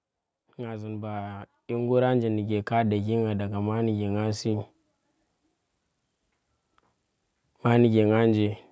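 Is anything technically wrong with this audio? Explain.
Yes. From 0.56 s to 4.55 s there is automatic gain rising. The gain control judged the speech input too quiet and raised its gain by about 13 dB over roughly four seconds, so the voice and the background noise swell together. The band-limiting from the call microphone processing, with nothing above 8 kHz, is ordinary.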